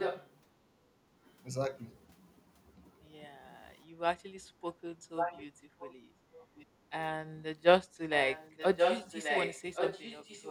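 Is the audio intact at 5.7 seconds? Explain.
No. From 5.01 to 5.7 s there is speech suppressed in double talk, likely because the echo canceller confused the talker with loudspeaker echo while both sides spoke. It pulls the voice down in brief dips of up to roughly 15 dB. Overlapping this, from 5.16 to 6.66 s, there is an echo leak: likely the echo canceller on the loudspeaker side failed to remove its loudspeaker pickup, so a copy of the voice returns about 1.13 s late, only slightly quieter than the speech itself.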